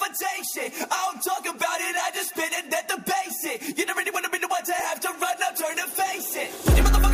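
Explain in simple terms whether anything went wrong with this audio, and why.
Something did go wrong, between 4.57 and 5.71 s: a short run of six ticks, each lasting barely a millisecond. These are CD scratch ticks. A scratch or mark on the disc wipes out more data than the player can repair, and it hits that spot once per turn of the disc, about five times a second here. What sets this apart from random crackle on a record is that the ticks arrive evenly spaced, like a small clock.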